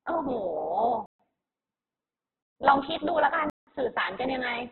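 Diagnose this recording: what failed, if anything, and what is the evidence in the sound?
The speech sounds rough, grainy and boxy throughout, with nothing above 4.2 kHz. This is likely heavy Opus compression in its music mode at a very low bitrate near 8 kbps. That starves the bands, so the encoder fills them with noise and narrows the bandwidth.

Three blocks of digital silence cut the sound dead: 1.06 to 1.20 s (about 135 ms), 2.43 to 2.56 s (about 132 ms), and 3.50 to 3.67 s (about 171 ms). The buffer was likely not filled in time, and the longest gap fits an 8192-sample block.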